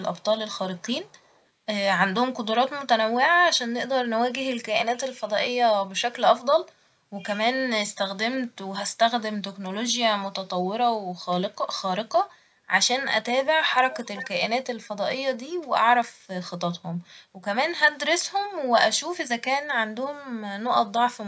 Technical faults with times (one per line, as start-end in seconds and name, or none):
0.19-0.23 echo leak
0.76-1.41 echo leak
13.92-14.29 echo leak